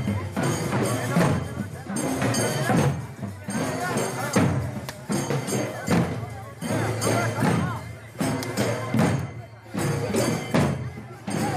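Nothing goes wrong anywhere in the audio, so there's no fault to report here.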